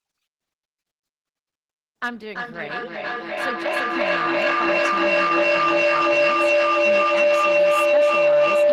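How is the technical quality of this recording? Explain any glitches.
The recording is badly compromised by feedback howl from 2.29 s to the end at 8.72 s. Two devices on the same call in one room form a loop, microphone to loudspeaker and back, that gains level each trip. Repeats grow rather than fade and collapse onto the frequency the loop favours, here a tone around 500 Hz. The howl pulses roughly every third of a second, matching the loop delay, and peaks about 14 dB above the speech, swamping it.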